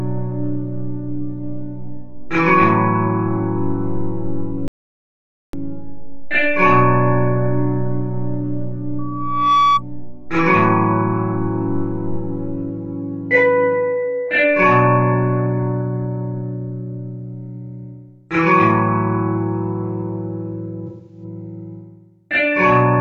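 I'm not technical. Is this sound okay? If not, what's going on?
No, there are three faults.

From 4.68 to 5.53 s the sound cuts to dead silence, with no background noise at all, for nearly a second. This is an audio dropout to silence, likely caused by the input briefly disconnecting or muting while recording continued, so that moment is gone.

From 8.98 to 9.83 s a single high tone at about 1.1 kHz swells up over roughly half a second into a squeal. That is loudspeaker feedback squeal: a microphone picking up the loudspeaker it feeds until that tone runs away.

From 20.87 to 21.24 s, about a fifth of a second sounds smeared and noisy. This is AAC frame loss with concealment: small chunks of the compressed audio went missing, and the player patched the gap with a guess based on the sound just before.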